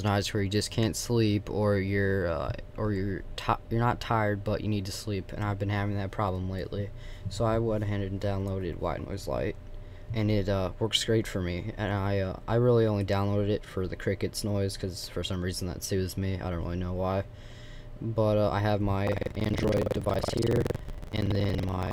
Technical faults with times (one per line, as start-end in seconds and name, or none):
19.04-21.92 buffer tearing